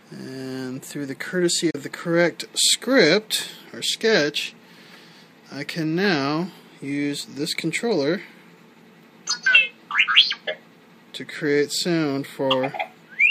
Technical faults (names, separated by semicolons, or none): digital broadcast dropout